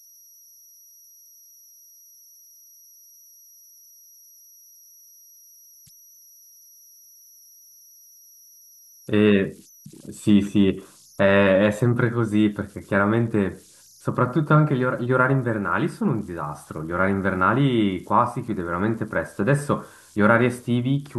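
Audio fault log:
throughout, converter idle tones: a faint whistle around 5 kHz sits in the pauses between speech, about 31 dB below the signal, with grainy noise under quiet passages, because an undithered delta-sigma converter locks into repeating bit patterns whenever its input is small.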